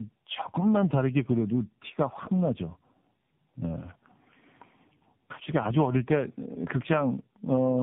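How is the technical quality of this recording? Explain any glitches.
Pretty rough, honestly. There's tandem speech coding the whole way through: two low-rate speech coders stacked, the second re-coding the first's damage. That leaves it muffled, gritty and warbly, with nothing above 3.7 kHz.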